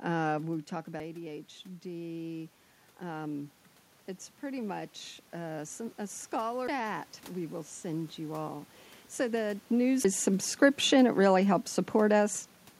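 Speech in which the level and the room noise swell together twice: from 0.43 to 3.62 s, after the talker moves back from the microphone around 0.5 s and the input falls by about 11 dB, and again from 4.42 to 8.65 s. Each time the rise is about 4 dB and gradual, spread over several seconds. That joint swell of voice and background is automatic gain rising. A gain control judged the input too quiet and slowly turned itself up, lifting everything it received, the room noise included. Breaks at 1.00, 6.68 and 10.04 s each come with a mute of only a few milliseconds, after which the speech carries on from a different point instead of continuing smoothly. These are CD skips. A knock or a flaw on the disc made the laser jump to another turn of the spiral, so the player briefly cut the output and resumed from a shifted position.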